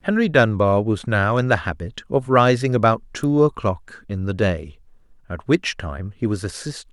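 A speech clip with a single electrical switching spike at 3.23 s: a sharp snap peaking around -20 dBFS, most likely from a nearby switch arcing. It shows as a thin vertical broadband line on a spectrogram and a narrow spike on the waveform.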